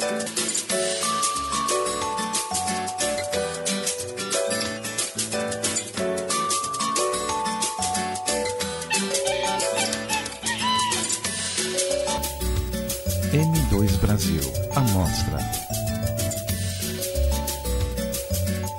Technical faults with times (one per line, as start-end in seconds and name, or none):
0.00-12.18 input switched to a poorer device